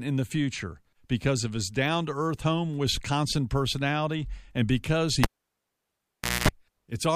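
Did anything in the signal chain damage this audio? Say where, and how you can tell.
Yes. Just after "personality and because", at 5.24 s, a sharp pop cuts the speech to near silence for about 1.2 s. A 60 Hz mains buzz lasting about 0.22 s follows, and a second pop brings the sound back at 6.49 s. This points to the analogue wiring: a cable pulled and plugged in while live. The buzz comes from the plug tip touching the jack before the ground connects, so hum is picked up.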